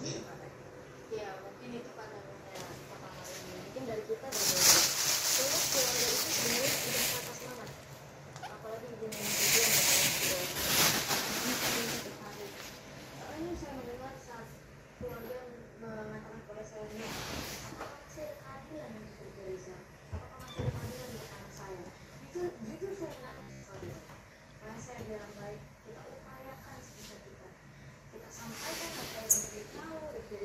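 From 23.29 to 23.65 s the sound turns robotic from repeated short buffers. A rigid, metallic buzz sits at 66.8 Hz. Most of that stretch is looped audio. Fresh data likely arrived too seldom, so a slice near 15 ms was replayed instead.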